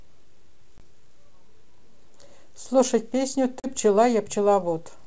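At 0.78 s the speech drops into a hard-edged silent gap, about 20 ms of lost audio, which fits a single missing packet. This is packet loss on an ADPCM call. The decoder's predictor and step size drift out of step with the sender's. So the speech comes back with brief slight distortion, settling by 0.84 s. A second hole at 3.60 s loses about 40 ms, roughly two packets, and recovers by 3.67 s. The wideband G.722 coding stays clear to 7 kHz throughout.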